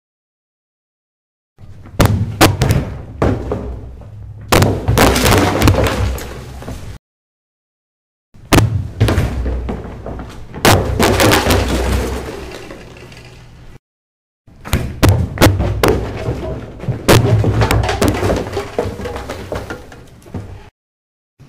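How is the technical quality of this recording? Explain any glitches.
The recording has one real problem running through it: integer overflow on the loud moments of these sounds. Throughout the clip, the level is driven about 4 dB past the top of the integer range. Only a few samples in every thousand actually cross the limit, but each one wraps to the opposite sign instead of being held at full scale. You hear that as sudden violent cracks on the peaks, much harsher and snappier than ordinary clipping.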